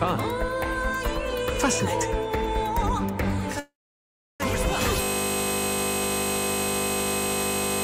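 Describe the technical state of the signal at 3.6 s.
Packets likely stalled in transit at 3.59 s, so the receiver's jitter buffer ran dry and it had to invent sound until delivery resumed at 4.42 s: a call audio freeze. The last sound carries on briefly as a fading buzz, then about 0.7 s of silence. When audio returns it picks up exactly where it stopped, so nothing is lost, but everything after runs 0.80 s later.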